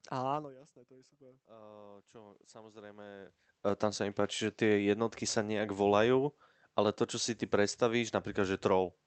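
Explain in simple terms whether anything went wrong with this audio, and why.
From 0.31 to 3.42 s there is automatic gain rising: the voice dropped, so the level control gradually turned up, making voice and room noise swell together.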